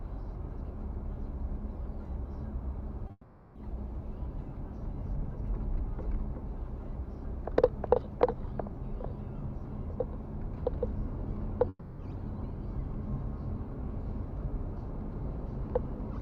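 At 3.07 s a short concealed packet loss occurs: about 20 ms of audio arrived too late, so the receiver extended the preceding sound, leaving a brief smear.

From 3.11 to 3.57 s, a long network dropout is the likely cause of the gap. The receiver stretches the last sound into a fading buzz or hiss for about 0.44 s, ending in silence before the audio resumes with that stretch missing.

From 11.69 to 12.01 s, a second long network dropout is likely behind a similar fault. About 0.3 s of sound is replaced by a fading continuation, followed by brief silence before playback picks up further on.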